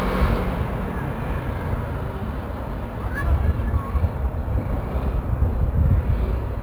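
Everyday sounds carry crude rate conversion throughout, consistent with a 32 kHz source stretched to 44.1 kHz by repeating samples. The irregular repeat pattern leaves an inharmonic fizz, roughly 35 dB down, that tracks loud and bright moments, unlike steady codec swirl or hum.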